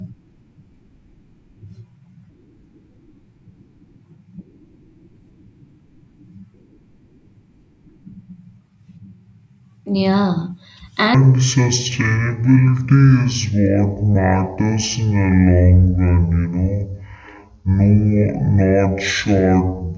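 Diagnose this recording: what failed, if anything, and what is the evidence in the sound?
A wrong sample rate fault at playback: from 11.15 s to the end, the speech drops a full octave (12 semitones) and runs at half speed. Pitch and tempo fall together by a factor of two, which fits 32 kHz audio played back at 16 kHz without conversion.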